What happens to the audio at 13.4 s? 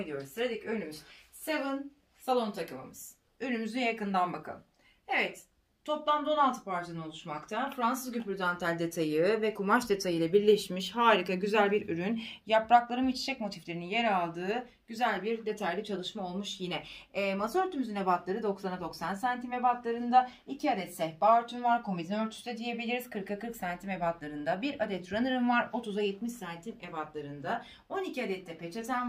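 At 13.4 s the audio plays through intact, with no dropout, click, distortion or other fault at that moment.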